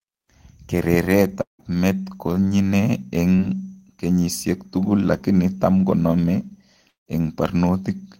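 At 1.41–1.61 s, before "met konyine", and 6.88–7.08 s, after "tugul lakini tam konome", a fading buzz then silence fills the gap, likely a long network dropout. Spectrograms show smeared bands sinking into a blank column.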